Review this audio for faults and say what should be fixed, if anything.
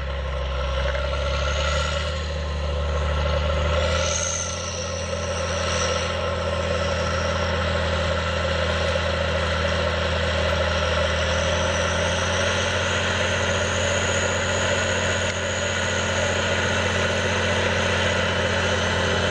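Nothing stood out on listening, so there is nothing here that needs fixing.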